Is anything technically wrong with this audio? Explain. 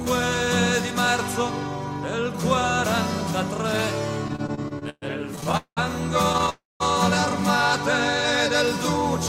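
Yes. There are two kinds of fault, both delivery problems rather than damage to the recording itself.

Repeated stalls (stutter) occur from 4.28 to 5.79 s and again from 6.33 to 6.50 s. Packets arrived more slowly than playback consumed them, so the jitter buffer kept running dry. The first span has 15 brief holds filled with continued sound, about 0.53 s in total, the longest near 0.2 s. The second has four tiny ones, none over 12 ms. Nothing is lost, but the sound drags and hiccups. Many short, repeated catches set this apart from a single freeze.

A call audio freeze follows at 6.50 to 6.82 s. The likely cause is packets held up in transit, emptying the buffer. The last sound is stretched and fades, then goes silent for about 0.19 s before playback resumes where it stopped. This is one sustained hold that dies away, not a string of stutters.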